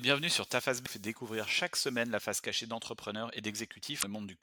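At 0.82 to 0.88 s, and again at 3.99 to 4.04 s, the speech is broken by damaged data in a compressed stream. Bytes in the encoded file were wrong, so the decoder misread those frames and lost sync while hunting for the next frame header. Each event lasts roughly 50 ms. A plain dropout leaves silence or a smoothed gap, but here the decoder itself loses its place in the stream.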